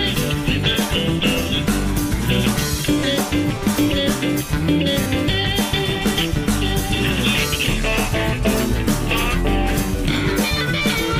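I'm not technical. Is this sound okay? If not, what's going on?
No. There is Bluetooth stutter at 3.00 and 5.04 seconds. Each time, about 20 milliseconds of audio went missing, which fits a single lost packet. The player repeated its last tiny slice, then skipped ahead.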